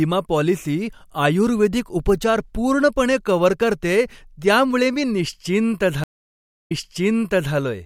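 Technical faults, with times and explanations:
6.04–7.54 s, stream reconnect: the connection dropped and a new decoder started mid-stream, leaving 0.59 s of silence, then the speech resumes 0.91 s earlier.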